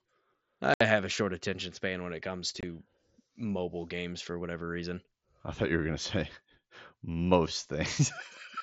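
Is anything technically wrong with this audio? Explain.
Yes. Unconcealed Bluetooth headset packet loss occurs at 0.74 to 0.81 s and again at 2.61 to 2.63 s. Short voice packets travelling over the mSBC link between headset and phone went missing, and nothing was synthesised to cover them, so silence or an idle pattern filled the gaps. The speech drops out abruptly for about 70 ms in the first hole and about 20 ms in the second, with hard edges that can click. The first gap fits a run of several consecutive lost frames.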